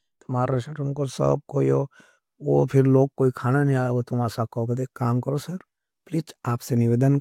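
No technical faults can be heard anywhere in this speech recording. Nothing in the audio stands out as going wrong at any point, so there are no events to place in time.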